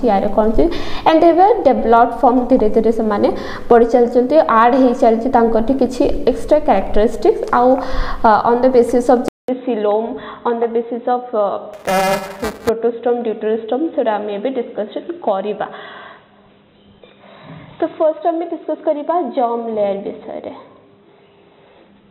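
At 9.28 s the sound drops out for 200 ms and returns duller and about 5 dB quieter, with a new noise floor about 50 dB down. This likely reflects the input switching to a poorer device, which holds to the end.

From 11.73 to 12.69 s, buffer tearing adds a robotic 375 Hz buzz, which fits a 128-sample buffer. Writer and reader have slipped, so around a tenth of each buffer replays audio from about 7 ms earlier, hard-joined on both sides.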